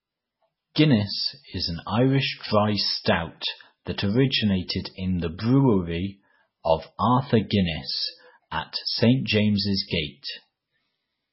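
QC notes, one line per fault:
throughout, MP3 compression. Nothing is heard above 5.6 kHz, where the treble is cut off hard. The sound is heavily damaged, watery and swirly, with weak detail flickering between frames. The likely cause is a bit-starved MP3 encoder, which fits a bitrate around 16 kbps.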